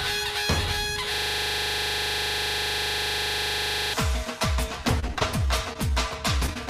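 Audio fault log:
1.14–3.94 s, system hang loop: Here the playback froze and the hardware just kept replaying its ring buffer. One 40 ms slice of sound repeats about 70 times, so you hear a steady, rough buzz-flutter at 25 Hz instead of the audio moving on. The loop length fits a driver or host stall where nothing new was written to the buffer, so the device kept cycling through what it already had.
4.85–5.23 s, repeated packet loss (robotic sound): Over this short stretch the stream drops out five times, with the longest gap at 25 ms. Each hole gets patched by extending the last bit of sound, so roughly a fifth of this span is fill rather than real audio. Because the patches come so close together, the passage turns choppy, with small pieces missing.
5.73–5.91 s, 6.46–6.50 s and 6.54–6.57 s, short concealed packet loss: Three quick hiccups, each losing about 20 ms that never reached the decoder in time. 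The receiver papered over each gap by carrying the previous sound forward, then blended back into the real signal. Each one comes across as a tiny smear or wobble. The first also stretches the timing a little, adding around 15 ms. The last two sit close together.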